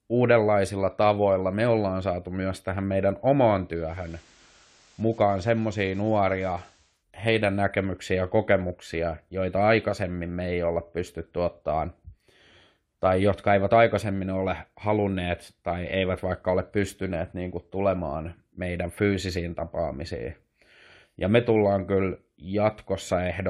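A speech recording in which, from 3.69 s to 7.05 s, a hybrid receiver is heard blending from digital radio to its analogue FM broadcast and back, each crossfade taking about 0.45 s. During that stretch hiss rises to roughly 30 dB under the signal and the level drops by about 2 dB. The smooth crossfades and the steady FM hiss floor distinguish it from a codec bandwidth switch or dropout, which would change abruptly without added noise.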